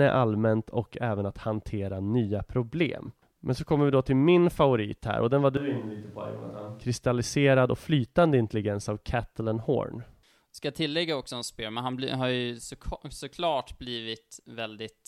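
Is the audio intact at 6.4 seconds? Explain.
No. Right after "här och den var", from 5.57 to 6.81 s, there's a switch to a distant microphone: the speech suddenly goes roomy and hollow, thinner in the bass, roughly 10 dB quieter, with more background noise. The close mic likely dropped out before cutting back in.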